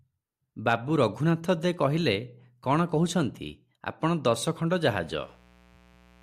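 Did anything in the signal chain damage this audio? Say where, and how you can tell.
Yes, analogue wiring. After "ଆପଣ ଦଶଖଣ୍ଡ", from 4.94 s to the end, a faint raspy mains buzz appears. Switching spikes, twice in every 60 Hz mains cycle, leak in through a dimmer, rectifier or missing shield.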